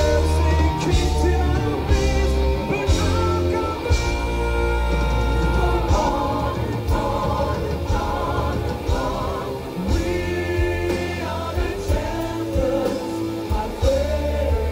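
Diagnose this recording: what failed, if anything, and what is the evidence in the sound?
Low bit depth without dither runs the whole way through, grainy distortion that follows the sound, roughly 30 dB down. Likely a sample-format conversion rounding to around 7 bits undithered.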